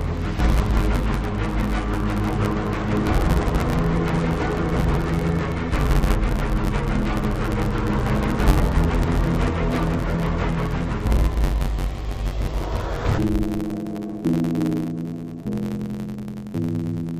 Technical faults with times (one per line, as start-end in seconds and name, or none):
0.00-17.19 interleaved audio read as planar